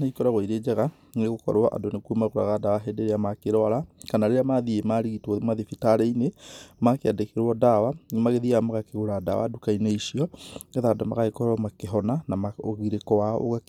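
Nothing here calls for comment, since the speech runs along without a single technical fault turning up anywhere in the recording.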